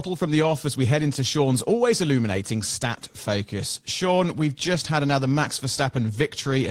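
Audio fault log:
No faults heard anywhere in this speech recording.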